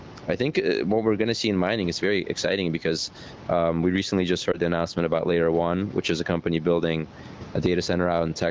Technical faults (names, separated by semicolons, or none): gain pumping; lost AMR speech frames